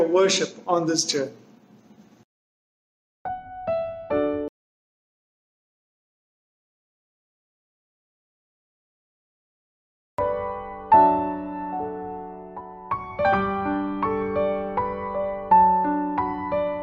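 An audio dropout to silence runs from 4.48 to 10.19 s: about 5.7 s of silence, no room tone, likely from a lost input while recording continued.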